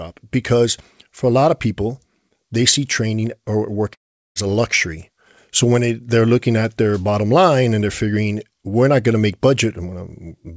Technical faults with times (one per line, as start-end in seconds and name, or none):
3.94-4.37 long network dropout